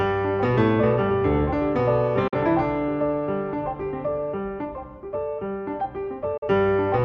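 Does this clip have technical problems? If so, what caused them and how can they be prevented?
Yes. There are two digital broadcast dropouts. The sound mutes from 2.28 to 2.34 s and again from 6.37 to 6.47 s. Each gap fades out over about 8 ms and then goes silent. The lost stretch is 42.7 ms each time, which fits one corrupted frame. The receiver got a frame that failed its check, or lost the signal briefly. It muted until clean frames returned, so that audio is gone. Stronger reception, a better antenna or stronger error protection would prevent it.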